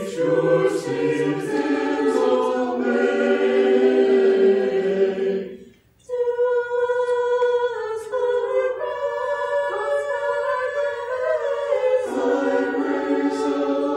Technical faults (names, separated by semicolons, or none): none